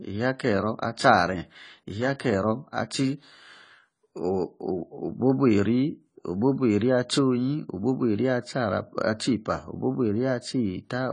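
Throughout the speech, AAC compression at a low bitrate is the likely cause, which fits a 24 kbps AAC-LC encode. The encoder discarded everything above 10.1 kHz and coarsely quantised the rest, leaving the speech dull and smeared, with a plainly audible warbling, fizzy texture on sibilants.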